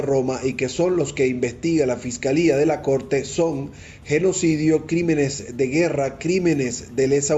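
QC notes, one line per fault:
No technical faults are audible anywhere in this audio; the signal level, continuity and tonal balance hold steady throughout.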